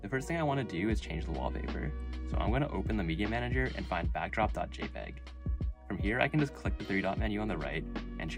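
No technical faults can be heard in the audio. Nothing in it points to a problem in how it was captured, processed or delivered.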